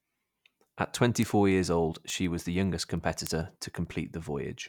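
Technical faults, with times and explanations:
0.21–4.58 s, word clock ticks: about thirty sharp ticks recur roughly every 0.15 s beneath the speech, the pattern of a digital link read by a receiver running on its own clock rather than locked to the sender. The clocks differ by something like 150 ppm, so each time they slip a full sample apart, one sample is dropped or repeated. This leaves a tiny step in the waveform and a thin, evenly spaced vertical line on a spectrogram.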